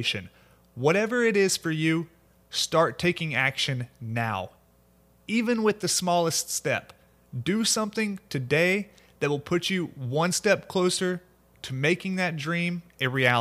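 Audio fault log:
No fault is logged for this speech clip.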